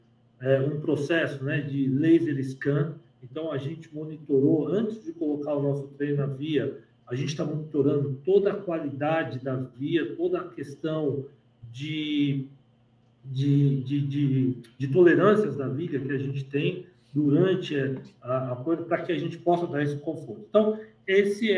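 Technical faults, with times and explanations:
No technical faults are audible anywhere in the recording.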